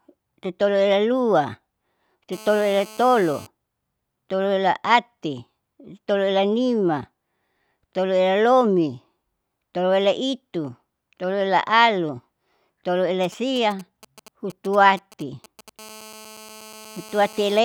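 From 2.33 to 3.47 s, and again from 15.79 to 17.60 s, GSM phone buzz: a nearby 2G handset in a call rectified into the audio, giving a steady raspy 217 Hz drone about 22 dB below the speech. On a spectrogram it forms evenly spaced horizontal harmonic lines. In between, from 13.24 to 15.70 s, GSM signalling bursts appear as a galloping dit-dit-dit of ticks and short buzzes, roughly 20 dB down, showing as clustered vertical stripes in the waveform.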